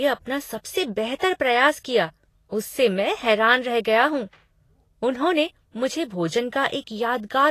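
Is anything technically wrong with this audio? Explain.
Yes. Throughout the speech there is plainly audible Vorbis compression damage, likely from encoding at a low bitrate, consistent with around 34 kbps. Nothing remains above 14.2 kHz, and the coarsely quantised treble turns fine detail into grainy hiss, roughening tones and softening consonant attacks.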